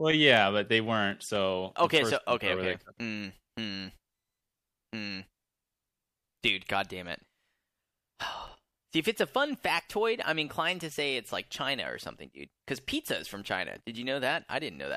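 At 0.37 to 1.36 s and again at 7.98 to 8.97 s the speech carries CD scratch ticks, five short clicks per burst at roughly five per second. A surface scratch has corrupted more data than the error correction can rebuild on each rotation, so the player patches the gaps by interpolating or muting. Each tick is a brief dropout of a few milliseconds, with the second burst's longest closer to 7 ms.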